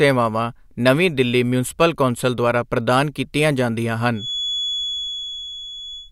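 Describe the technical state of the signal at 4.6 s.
At 4.6 s the signal carries a feedback whistle, likely caused by the loudspeaker-to-microphone loop sitting just at the edge of feedback, so that one frequency keeps recirculating without building up. It begins at 4.12 s, right after "ਦੁਆਰਾ ਪ੍ਰਦਾਨ ਕੀਤੀਆਂ ਜਾਂਦੀਆਂ", and runs to the end of the clip. It sounds like a thin, steady 3.4 kHz whistle about 10 dB beneath the speech, swelling and fading slowly in level.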